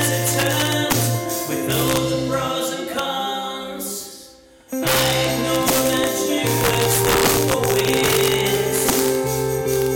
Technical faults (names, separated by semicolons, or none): integer overflow